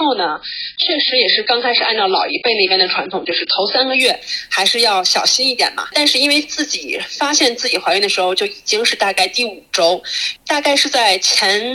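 For the first 4.0 seconds, the player is working from the low-bitrate rung of an adaptive stream, a quick-start choice made before it has measured the connection. The sound fits an AAC encode of around 16 kbit/s. Nothing is present above 5.4 kHz, so the top is dull and closed in, and codec smearing is plain. At 4.0 s the player steps up to what sounds like roughly 96 kbit/s. The treble returns at once, with no dropout at the switch.

Throughout the clip, a stage in the chain receives a signal driven about 3 dB past its limit, so the highest peaks are sheared flat. This is hard clipping. Only a small fraction of samples, around one in a thousand, actually hit the ceiling. It is heard as brief, gritty crackle riding on the loudest moments rather than continuous fuzz, with added high harmonics briefly roughening those peaks.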